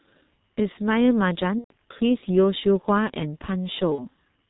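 A speech clip carried over an internet phone link. The whole recording has the muffled, hoarse sound of the G.723.1 codec. Nothing is heard above 4 kHz, consonants smear, and the coarse model struggles to follow the voice, which fits heavy coding at roughly 6 kbit/s. VoIP packet loss concealed by the speech codec occurs twice. From 1.59 to 1.73 s the sound stretches out, fades and then mutes, matching about four lost 30 ms frames. A shorter patch follows from 3.95 to 4.04 s, consistent with one lost frame.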